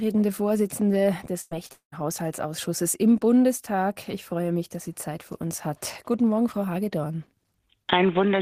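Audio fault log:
1.41 to 1.53 s, burst of packet loss: about a tenth of a second drops out here. The receiver holds onto the last bit of sound and keeps playing it for roughly 97 ms, easing the level down as it goes, so you get a short fading buzz or hiss instead of the real audio. When things pick up again, playback jumps ahead, and around 100 ms of the original is simply gone.
1.67 to 1.71 s, short concealed packet loss: a much smaller hole this time, only about 20 ms that didn't make it to the decoder in time. The receiver papers over it by extending whatever came just before, around 18 ms of fill, and then crossfades back into the genuine signal. It's so brief that all you catch is a little smear or wobble, and any short consonant sitting in that spot can vanish outright.
1.73 to 1.94 s, long network dropout: right after that, a longer gap of about 200 ms. At first the receiver carries the last sound forward as a fading buzz or hiss, but it can only stretch that for so long, so the last roughly 120 ms go fully quiet. 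The audio returns further along with the missing piece skipped. It sounds like the connection cut out entirely for a moment, likely a brief network stall on the link.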